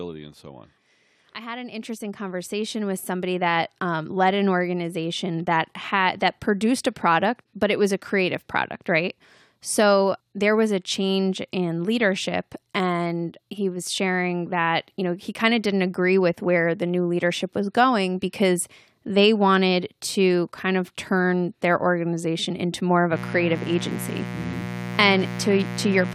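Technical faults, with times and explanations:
0.41–8.52 s, automatic gain rising: the level climbs by about 13 dB over roughly eight seconds, speech and background noise swelling together, because the gain control judged the input too quiet and kept raising its amplification step by step.
23.09–26.14 s, mains buzz: right after "organization into more of", a steady, raspy buzz sits roughly 10 dB under the speech to the end. Sharp switching spikes twice per 60 Hz cycle leak in, spreading harmonics up into the kilohertz range.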